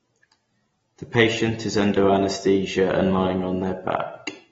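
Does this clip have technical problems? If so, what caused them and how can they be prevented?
Yes. The speech sounds dull and smeared throughout, with a fizzy, warbly edge on sibilants and nothing above 7.6 kHz. That's likely AAC compression: an AAC-LC encoder short of bits, which fits about 24 kbps, cut the top and thinned the spectrum. Encode at a higher bitrate next time.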